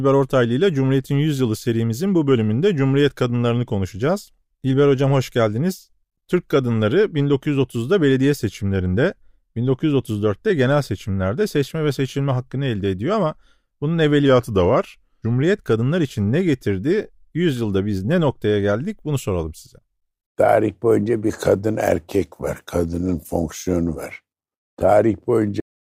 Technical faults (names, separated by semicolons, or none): drift correction step; cut-off end